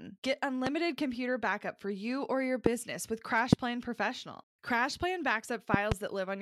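Loud pops land at 0.67–0.69 s, just before "computer backup for you", at 2.66–2.69 s after "for you or your", at 3.53–3.55 s, and as a double pop across 5.74–5.94 s. Each is a sharp thump over the continuing speech, around 20 to 25 dB above it, likely from an electrical voltage spike. It shows as a tall waveform spike and a thin broadband vertical stripe on a spectrogram.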